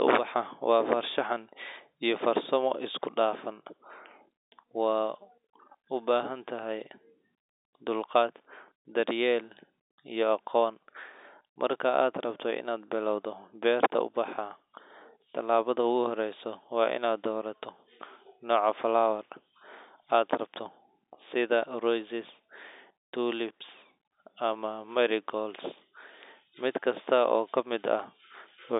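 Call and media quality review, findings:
No faults found on this call recording.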